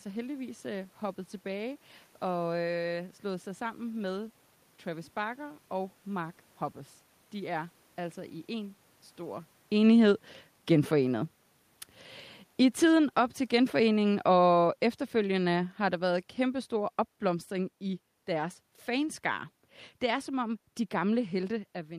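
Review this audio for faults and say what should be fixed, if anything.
Automatic gain falling runs from 12.56 s to 21.32 s. The AGC judged the input too loud, or the room noise too strong for its starting gain, and eased down by about 9 dB over those nine seconds, so the speech and its background sink together. The level shifts around 9.5 s and 21.5 s are just the talker moving. To prevent it, set the input gain manually, or turn off AGC for this setup, so the level can't drift down mid-recording.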